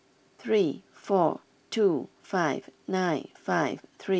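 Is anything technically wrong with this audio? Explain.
No, the speech comes through G.722 wideband telephone coding at 64 kbit/s with at most a faint trace of the coding, and nothing in the signal marks a technical fault.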